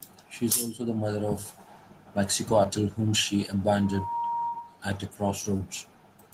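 A speech clip marred by three brief smears at 2.63–2.66 s (just before "whom she"), 4.48–4.62 s and 5.57–5.61 s. This is short concealed packet loss: 20 to 40 ms of audio arrived too late, and the receiver bridged each gap by extending the preceding sound. At 4.48 s this stretches the timing by roughly 15 ms. From 3.77 to 4.85 s, right after "whom she", a steady 940 Hz tone swells over about 0.4 s to sit roughly 5 dB below the speech. This is loudspeaker feedback squeal, where the microphone picks up its own loudspeaker and the loop gain at that frequency exceeds one.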